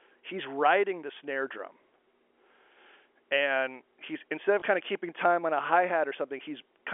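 At 4.6 s, between "and he's instead of" and "kind of keeping time", audio went missing in transit, and the receiver filled the 20 ms gap, which fits a single lost packet, by playing the previous packet again. This is packet loss with last packet repeated. The repeat sounds like a small blip in the telephone-band speech that the G.711 coding keeps to about 300 Hz to 3.4 kHz.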